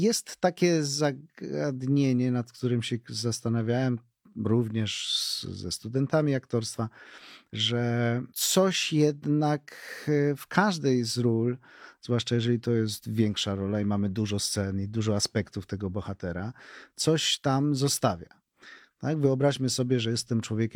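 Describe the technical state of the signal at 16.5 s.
At 16.5 s the speech signal is intact, with no audible fault at that point.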